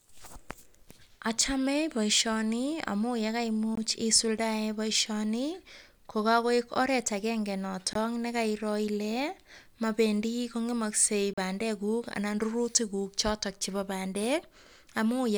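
Three brief holes in the speech, at 3.75, 7.93 (after "ko kakoek oret agenge") and 11.33 s, each about 20 ms except the last at 40 ms. Speech resumes as if it kept playing, likely a Bluetooth dropout of one or two packets.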